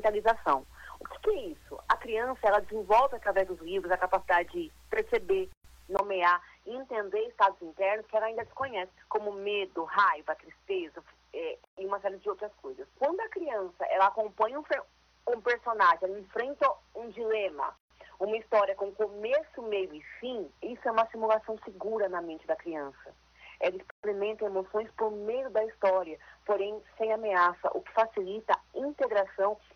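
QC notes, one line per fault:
5.53 to 24.04 s, gap at a join of encoded pieces: the sound drops out abruptly four times, at 5.53, 11.64, 17.77 and 23.90 s, once every 6 s. The first gap lasts 118 ms and the rest about 130 ms each. The edges are smeared, and the sound resumes where it stopped. Separately encoded segments were joined without trimming, so each one keeps its encoder's leading delay and its final-frame padding as silence.
5.97 to 29.76 s, input switched to a poorer device: after a 20 ms dropout the sound turns duller and narrower, with nothing above 6.2 kHz for the rest of the clip. A new noise floor appears about 50 dB below the signal, and the level stays roughly the same. This sudden loss of bandwidth and change of tone likely comes from the recording input changing mid-take to a lower-quality microphone or a headset's call profile.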